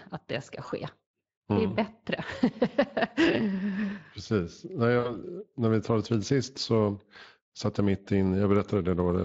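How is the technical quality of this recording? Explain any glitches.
Two short dropouts stand out, both VoIP packet loss concealed by the speech codec. The light hoarseness from the Speex coding itself runs through the whole clip. At 0.65 to 0.71 s the sound briefly smears into a stretched, fading tone or noise and then recovers. About 20 ms of audio is missing, which fits one lost frame. The decoder filled the gap by repeating its last pitch and spectral shape at falling gain. The second gap, at 4.99 to 5.20 s, is longer. The sound stretches into a fading tone or noise for about 60 ms, which points to three consecutive lost frames. Because each decoded frame depends on the previous one, the sound stays weak or distorted after packets resume, until about 5.20 s.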